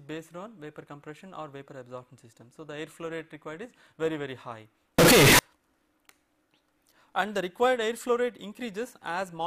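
From 4.99 to 5.39 s the sound jumps to a very loud, harsh, nearly square waveform at an almost fixed, high level, with background noise as loud as the main signal while pitch stays traceable. This is a float read as integer fault, likely 32-bit float samples interpreted as 32-bit integers.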